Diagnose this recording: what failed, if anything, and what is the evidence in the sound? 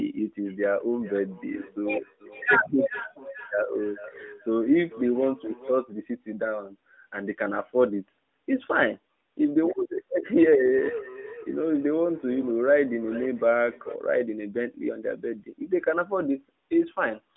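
Feedback echo between two devices, in the acoustic path of the call. From 0.45 to 5.86 s and 10.58 to 14.01 s, the speech returns roughly every 0.4 s. It peaks about 19 dB, then about 15 dB, below the speech. Each device's echo canceller removes only its own playback, so the other device's sound loops back.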